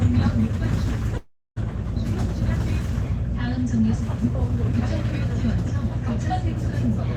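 At 1.17–1.58 s a call audio freeze stretches the last sound into a fading buzz, then about 260 ms of near-silence, likely from delayed packets; the spectrogram shows smeared, then blank, bands.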